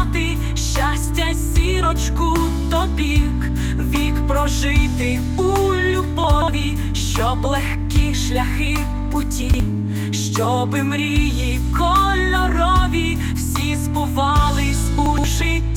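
At 6.24–6.48 s, 9.42–9.6 s and 15.06–15.24 s, chunks play out of order: a 60 ms block arrives three, then two, then two chunks late, producing brief jumbled moments. Spectrograms show shuffled blocks bounded by thin vertical broadband lines; waveforms show abrupt steps at each join.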